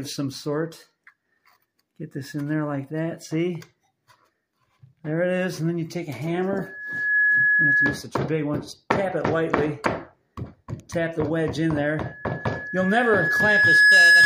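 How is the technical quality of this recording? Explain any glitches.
Two bursts of loudspeaker feedback squeal spoil it: a single 1.7 kHz tone swells up from 6.58 to 8.04 s, then again from 12.02 s to the end, building more slowly and louder. The mic is re-catching its own speaker until that pitch runs away.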